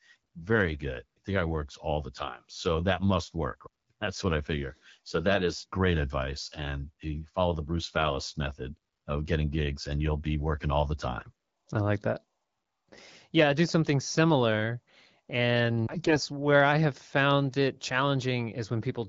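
AMR bit errors hit this speech clip at 11.18 to 11.32 s, between "be working all the" and "I like that", and at 15.91 to 16.19 s, just before "where I have found". Flipped low-priority frame bits misplace the excitation pulses and skew the pitch, gain and spectral detail, so the voice holds its level but turns hoarse and gargly.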